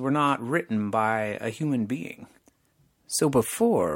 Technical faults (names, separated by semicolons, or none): none